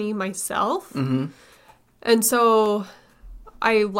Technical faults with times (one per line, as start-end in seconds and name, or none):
2.66 dropped samples